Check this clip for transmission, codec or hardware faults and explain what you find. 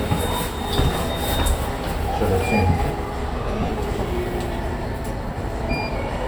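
Two bursts of lost LE Audio frames, at 3.61–3.71 s and 5.28–5.36 s. The Bluetooth decoder concealed about 70 ms and 40 ms of gaps, scattered in short runs, by reusing the last spectrum with randomised signs. Tones smear into brief noise, visible as grainy, blurred vertical patches on a spectrogram.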